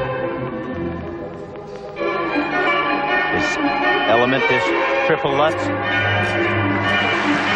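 At 0.48 to 0.50 s, then at 1.66, 2.66, 3.54 and 7.12 s, compressed frames are skipped: whole blocks of coded audio never reach the output, so the sound jumps forward by roughly 150 ms, 200 ms, half a second, 300 ms and 400 ms respectively. The coded frames are 23.2 ms long.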